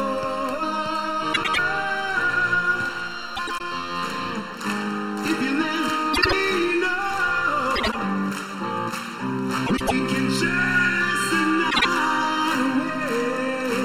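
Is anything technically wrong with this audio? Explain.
Yes. Channel delay (comb filtering) runs throughout. One channel arrives about 0.7 ms late, so summing cancels evenly spaced frequencies from around 700 Hz. The sound is hollow and phasey.

Frames out of order occur at 1.33–1.59 s, 3.36–3.61 s, 6.13–6.33 s, 7.75–7.96 s, 9.66–9.92 s and 11.70–11.85 s. Two adjacent blocks swap places, so each stretch flutters. No time is lost.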